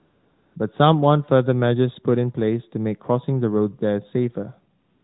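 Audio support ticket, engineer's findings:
AMR comfort noise at 0.00–0.56 s and 4.80–5.04 s: real background swapped for steady, smooth synthetic hiss. Phone's DTX judged no talk, sent no speech frames; receiver generated fill noise from level/spectrum parameters. Unlike a gate or dropout, noise continues rather than going silent. Narrowband AMR path audible, light codec colouring.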